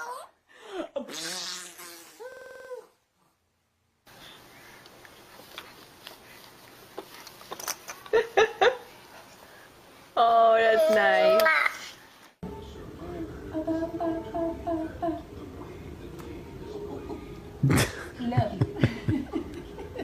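From 2.32 to 2.69 s the system stalled while the sound hardware kept replaying its ring buffer, a system hang loop. One 46 ms slice, which fits a 2048-sample buffer, repeats eight times at 21.5 Hz, a machine-gun stutter, with essentially nothing lost afterward.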